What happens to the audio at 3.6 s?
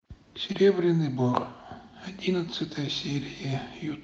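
Nothing goes wrong at 3.6 s; the speech carries on intact there, with no dropout, glitch or other fault at that moment.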